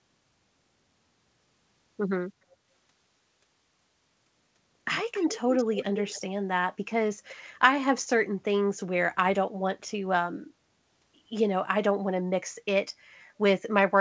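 From 2.45 to 2.69 s, the echo canceller clamped the microphone while the loudspeaker was active. This is background gated by the echo canceller: the room sound dips by about 10 dB for roughly a fifth of a second, then returns.

From 5.13 to 6.21 s, a delayed copy of the speech trails the original by 280 ms, sitting around 10 dB below it. This is most likely an echo leak, where the far end's canceller failed to remove its loudspeaker's sound from its microphone and sent it back. Like the rest of the call, the returned copy passes through the G.722 path, with nothing above 8 kHz.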